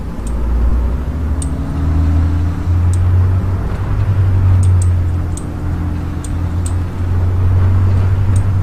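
At 0.70–0.72 s and 3.41–3.44 s, lost LE Audio frames (about 22 ms, fitting three frames) were concealed with random-sign spectra, giving brief noisy smears visible as grainy, structureless spectrogram patches.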